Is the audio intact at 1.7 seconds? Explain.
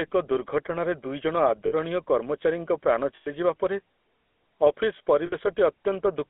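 No. From 1.66 to 1.72 s the sound catches on itself: instead of moving on, it holds as a brief rough, metallic ring before normal audio resumes. These are lost GSM frames. About 60 ms went missing, which fits three dropped 20 ms frames. The decoder covered the gap by reusing the filter and excitation settings from the last good frame, repeating them, which produces that frozen, ringing texture.

Underneath that dropout, at 1.7 s as everywhere else, the speech has a buzzy, gravelly roughness and a narrow, telephone-like tone, with nothing below 250 Hz or above 3.4 kHz. This is the GSM full-rate codec, and its damage is plainly audible, consistent with 13 kbps encoding. It models the vocal tract with a short filter and drives it with a coarse pulse excitation that keeps only every third sample, so fine detail in the waveform is replaced by that grainy buzz.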